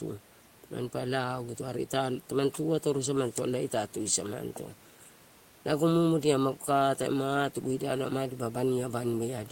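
Nothing technically wrong turns up in this speech recording; the only extra sound is some quiet room noise sitting about 31 dB below the speech, which is just part of the space it was recorded in.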